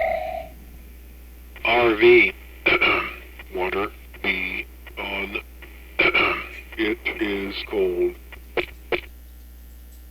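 No technical faults can be heard anywhere in it.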